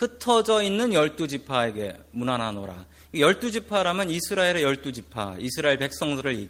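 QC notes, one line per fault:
No faults to note for this speech clip.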